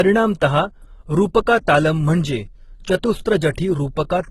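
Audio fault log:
throughout, transcoding between lossy codecs: the speech carries two kinds of coding damage at once. A smeared, swirly texture in the upper range fits a low-rate HE-AAC encode near 16 kbit/s, and grainy Opus-style artefacts over it suggest a second pass near 24 kbit/s. The likely cause is one lossy codec re-encoding another's output. What sets this apart from a single low-bitrate encode is the mix of two distinct artefact types.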